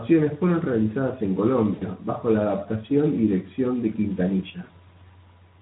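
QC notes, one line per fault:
1.73–1.83 s and 4.63–4.70 s: VoIP packet loss concealed by the speech codec. After "fueron realizadas en", 80 ms turns into a fading extrapolation of the last pitch before "bajo la adaptación y"; the 60 ms second gap likewise suggests several lost 20 ms Speex frames.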